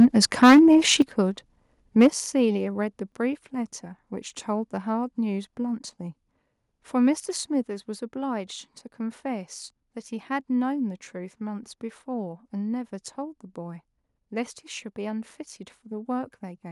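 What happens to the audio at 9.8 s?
Nothing goes wrong at 9.8 s; the speech plays through that moment intact, with no dropout, click or distortion.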